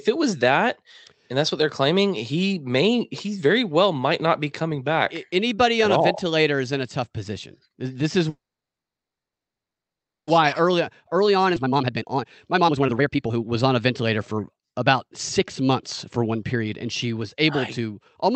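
Call audio freeze, 8.29 to 10.29 s: the speech stops for about 2 s. The receiver briefly carries the last sound on for a moment, then falls silent for roughly 1.9 s before the talker resumes exactly where they left off. Nothing is lost. The pause is simply inserted, pushing everything after it about 2 s later. The likely cause is packets being held up in transit so the jitter buffer ran dry and had nothing to play.

Jitter buffer speed-up, 10.41 to 14.83 s: once the delayed packets arrive, the receiver has far more audio queued than it wants. To claw back the backlog it repeatedly cuts out tiny slices a pitch period or so long, playing the speech at about 130% speed while keeping the pitch unchanged. The talker sounds rushed and clipped through this stretch, with roughly one and a half seconds of audio trimmed away in small pieces.

Skip ahead, 11.55 s, inside the sped-up stretch: playback jumps forward abruptly, with only a hair of a gap, about 10 ms. 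Roughly 0.7 s of speech is dropped outright, likely discarded as the overfull buffer overflowed while later audio was already waiting. The material on either side is butted together almost directly, so part of a phrase simply vanishes. Throughout, the call path's Opus coding limits the audio to about 8 kHz.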